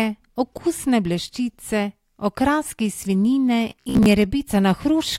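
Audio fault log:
3.70 to 4.09 s, robotic sound from repeated short buffers: the speech collapses into a rigid, metallic buzz at about 66.7 Hz that still loosely tracks the syllables. A 66.7 Hz buzz means a 15 ms slice being looped, likely because fresh audio arrived too seldom and the last buffer was replayed to fill the gap, with roughly half the real signal skipped. Unlike plain dropouts there is no silence, and unlike a stuck loop the pitch stays fixed while the contour moves on.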